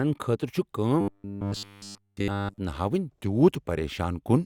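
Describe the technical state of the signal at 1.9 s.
At 1.9 s the speech has robotic sound from repeated short buffers, spanning 1.01 to 2.58 s. A roughly 10 ms chunk is likely being looped in place of all the fresh audio, forcing a rigid metallic buzz at 100 Hz. A waveform would show identical 10 ms cycles, and a spectrogram would show flat, evenly spaced 100 Hz harmonics.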